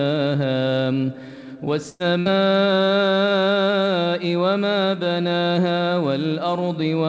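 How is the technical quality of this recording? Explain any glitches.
Two short dropouts close together, both a burst of packet loss. The first runs from 1.90 to 2.02 s, the second from 2.20 to 2.28 s. In each, a run of packets never arrived in time, so the receiver stretched the last bit of sound and faded it down to fill roughly 100 ms, then 60 ms. You hear a brief held, dimming smear, then the audio jumps ahead with that stretch gone. The call path caps the band at 8 kHz, which fits G.722.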